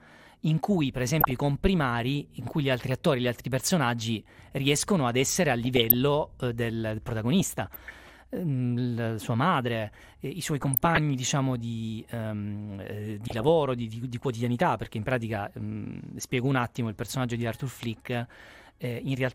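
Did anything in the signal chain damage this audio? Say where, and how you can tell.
Yes, the damage sits at the codec stage, and it's textbook DAB burbling. You hear burbling over the speech at 1.21–1.32 s (just after "in cui per"), 2.88–2.91 s, 5.65–5.94 s, 7.40–8.15 s, 10.61–10.99 s and 13.28–13.49 s (right after "diciamo di ehm eh"). Weak reception let a few tenths of a percent of bit errors slip past error correction into the MP2 data. Corrupted samples then put short blips of noise into single sub-bands, and corrupted scale factors make sub-bands jump in level for up to a frame.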